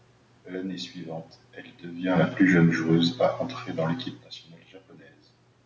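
A speech clip with automatic gain falling from 1.95 s, right after "suivante elle", to 3.16 s, just before "à entrer dans l'équipe". The gain control judged the input too loud or its background noise too strong and eased it down by about 4 dB, so the voice and room background sink together. On the waveform the envelope tapers gently, and the spectrogram dims evenly below its 8 kHz ceiling.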